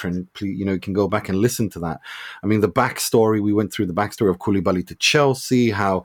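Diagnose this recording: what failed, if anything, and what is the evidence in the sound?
Resampler restarted on every block, in the sample-rate conversion stage. From 3.78 s, after "the backstory we went", a 50 Hz buzz rides the speech. Each 20 ms block converted from 48 kHz to 44.1 kHz gets a small error at its edges.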